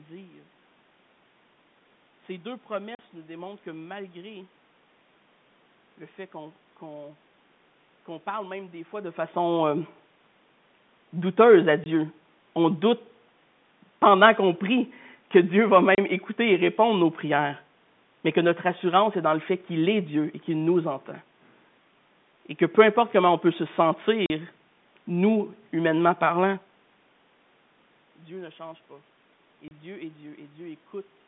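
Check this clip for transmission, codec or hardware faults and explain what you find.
One transmission fault is audible: packet loss filled with silence, in five places.

The speech drops out at 2.95–2.99 s just before "nous démontrent que", at 11.84–11.86 s just after "douteuse à", and at 15.95–15.98 s just before "écouter et répondre nos". It drops out again at 24.26–24.30 s and 29.68–29.71 s. The gaps last 20 to 40 ms, in steps that point to 10 ms packets. Lost packets were replaced with silence, so each hole starts and ends abruptly.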